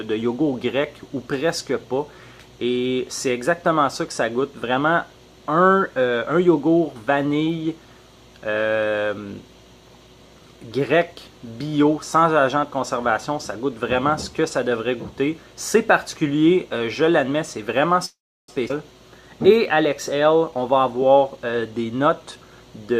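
Three network-style glitches land close together near the end. First, at 18.05 to 18.50 s, there's a call audio freeze. The sound stops moving forward for about 430 ms. For roughly the first 100 ms the last bit of audio is stretched into a fading buzz, and then about 330 ms of silence follows. After that the audio resumes right where it left off, so nothing is lost, but about 430 ms of extra delay is now baked in. That pattern likely means packets stalled in transit and the jitter buffer ran dry while the receiver filled the hole. Right after, at 18.68 to 18.72 s, there's a skip ahead. Playback jumps forward with only a 14 ms seam, and around a fifth of a second of material is simply gone. The two sides are butted together almost directly. That's what you get when a chunk is dropped while later audio is already queued, which claws back about 200 ms of the delay. Finally, from 20.27 to 22.51 s, a jitter buffer speed-up kicks in. 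The audio runs about 9% fast with the pitch unchanged, so it feels a bit rushed. The receiver is snipping out tiny pitch-period-sized slices over and over, about a fifth of a second in total, to drain the backlog that piled up in the buffer.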